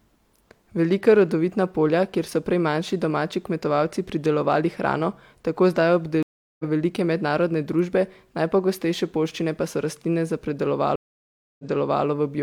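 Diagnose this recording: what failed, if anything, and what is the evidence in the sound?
A network-stage stream reconnect occurs twice. At 6.23–6.65 s, after "pridelovali hrano tako zdaj", there is about 0.37 s of silence, and the speech resumes about 0.3 s further on at "velike mednarodne družbe najpogostejše". At 10.96–12.05 s, a 0.63 s gap ends with 0.46 s of speech repeated, because the server resent a burst. A plain dropout would leave the timeline continuous. Here each break rejoins at a different point in the stream, so a new connection and decoder picked up mid-stream.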